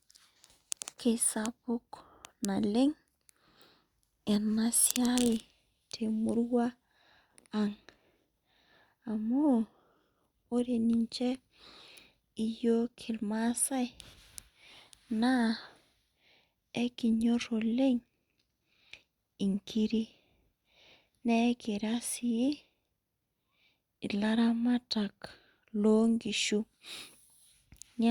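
No technical faults occur at any point in the recording.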